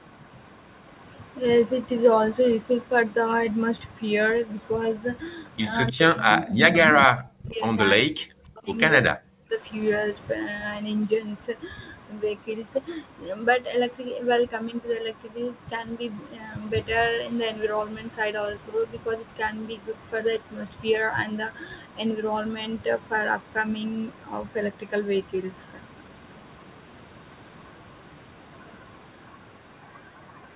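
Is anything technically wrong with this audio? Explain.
Yes. Two problems appear in the speech between about 5.9 and 9.6 s.

Echo leak: brief copies of the speech come back 301 ms late at 5.87–5.91, 6.29–6.47 and 6.86–7.02 s. They grow from very quiet to only moderately below the speech. The likely cause is a far-end echo canceller letting loudspeaker sound back into its microphone.

Speech suppressed in double talk: the speech dips sharply, by roughly 40 dB at worst, at 5.9–7.63, 7.96–8.77 and 9.01–9.62 s. This is likely an echo canceller unable to separate overlapping talk and turning everything down.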